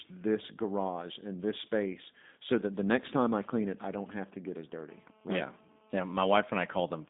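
Throughout, the speech carries G.729 codec damage: a slightly rough, synthetic quality from speech rebuilt out of a filter model and a few pulses, consistent with an 8 kbit/s codec. On a spectrogram the energy sits between 200 Hz and 3.7 kHz, with nothing above 3.8 kHz.

Just after "space so that the", from 2.91 to 4.81 s, GSM signalling bursts intrude: a nearby 2G phone's sporadic radio bursts are rectified by the audio circuit into galloping ticks and short 217 Hz buzzes, roughly 25 dB below the speech. The waveform shows clustered spiky groups, and the spectrogram shows intermittent vertical striping.

From 4.89 to 7.05 s, steady GSM phone buzz follows as the phone holds a call and pulses 217 times a second. It is a hard, raspy buzz about 33 dB below the speech and unrelated to it. On the spectrogram it forms continuous horizontal lines at 217 Hz and its many harmonics, and the waveform shows a regular comb of pulses.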